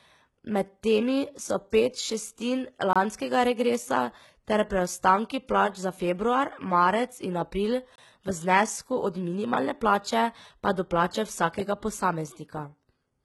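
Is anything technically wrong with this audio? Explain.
Yes. The speech has gone through heavy low-bitrate compression, likely HE-AAC at around 16 kbps. The codec spends its few bits on the lower spectrum and rebuilds the top end by spectral band replication, copying lower bands upward under a coarse envelope. That synthetic treble keeps some brightness, but its harmonics don't line up with those below the crossover, so sibilants come out gritty, metallic and lispy throughout.

There is also a gap between chunks, at 2.93 s and again at 7.96 s. The audio was delivered in 5-second chunks, and each join leaves about 25 ms of silence before the next chunk starts. Nothing is missing, but the speech is cut by a short hole. The first comes just before "regresa ter preostanki plač", and the second follows about one chunk length later.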